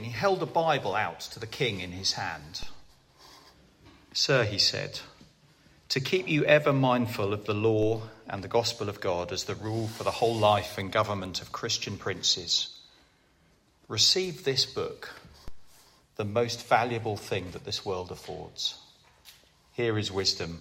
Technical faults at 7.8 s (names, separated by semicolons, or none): DC step